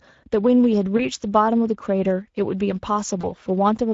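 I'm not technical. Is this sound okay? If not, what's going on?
No, not quite. The whole clip has Speex codec damage you can plainly hear. Speex is an older speech codec built for internet calls and game chat, and at the setting used here it doesn't have enough detail to rebuild the voice properly. That's why the speech sounds rough and hoarse all the way through, and the higher, airy part of the sound is just a hissy imitation rather than the real thing.

There are also two short hiccups from VoIP packet loss concealed by the speech codec, at about 0.97 s and 3.21 s. Each time, a tiny chunk of the call, about 20 milliseconds, went missing in transit. The decoder covered the gap by guessing, carrying the last bit of sound forward and letting it fade, so you hear a brief smear, and the voice takes a moment to sound normal again.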